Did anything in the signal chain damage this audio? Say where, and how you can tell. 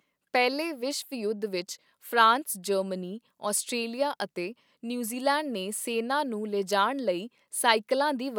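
No, no signal chain damage.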